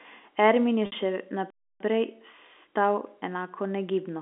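Telephone-band speech, limited to roughly 250 Hz to 3.5 kHz as G.711 coding allows, carries two distinct dropouts. From 0.86 to 0.92 s, a packet loss with pitch repetition covers a 60 ms gap, which fits three 20 ms packets. The receiver fills it by looping the last pitch period, so the sound holds on a slightly buzzy, steady tone that fades before speech resumes. That filled-in texture marks it as concealment rather than a true break. The second fault is a playback stall from 1.50 to 1.80 s, just after "je še". Here the output goes completely silent for about 300 ms, with no buzz or fading tail, and the speech then carries on. That clean, dead silence points to the player likely running out of buffered data or being briefly blocked, not to lost packets.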